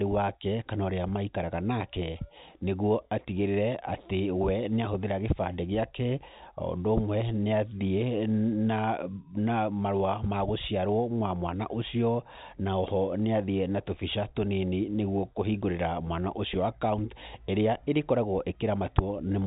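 No technical faults can be heard anywhere in this speech recording. It comes through the G.711 telephone coding path, so the sound is band-limited with nothing above about 3.8 kHz, and any coding noise is faint at most.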